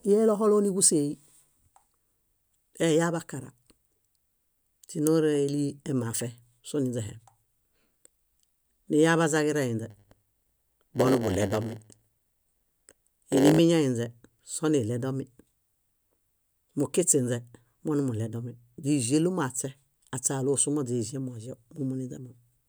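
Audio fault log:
9.90 to 13.59 s, block size mismatch (padded): for these 3.7 seconds the speech carries a steady buzz at 100 Hz, the rate at which each processing block arrives. One stage is handing over blocks shorter than the next stage expects, and the missing part of every block is filled with zeros. Those short silent gaps repeat once per block, producing the buzz, and they stretch the timeline so the speech runs at about 0.92 times normal speed while its timbre stays essentially unchanged.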